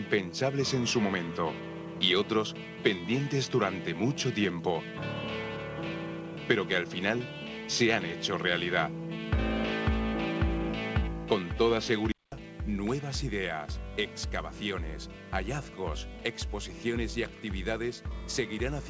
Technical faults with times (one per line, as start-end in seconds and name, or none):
0.00-12.32 input switched to a poorer device